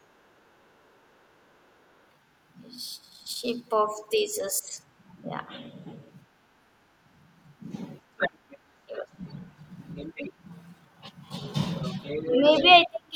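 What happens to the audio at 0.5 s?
The echo canceller, reacting to sound coming from the loudspeaker, clamped down on the microphone from 0.51 to 0.77 s, so the background is gated by the echo canceller there. For that brief stretch, a little over a quarter of a second, the room sound sinks by about 13 dB at its deepest and then comes back as the canceller releases, leaving a short hollow gap where the ambience briefly drops away.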